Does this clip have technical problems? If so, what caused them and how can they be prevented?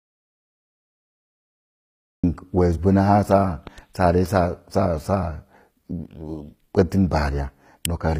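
Yes. The speech opens in an audio dropout to silence: from the very start until about 2.24 s there's silence with no room tone, most likely because the input was lost and the recorder kept writing silence. Check cables, links and mute states before recording.

Throughout, the treble has a gritty, metallic edge from HE-AAC compression. The top end is rebuilt, so s sounds don't sit right, and nothing reaches past 15.5 kHz, which fits a low bitrate around 24 kbps. Encode at a higher bitrate instead.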